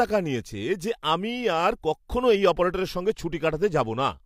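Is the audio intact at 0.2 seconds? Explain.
Yes, at 0.2 seconds the speech plays through intact, with no dropout, click, distortion or other technical fault at that moment.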